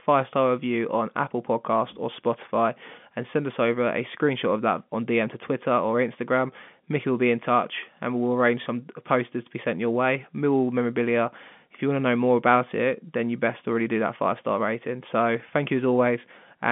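No technical faults can be heard in this speech.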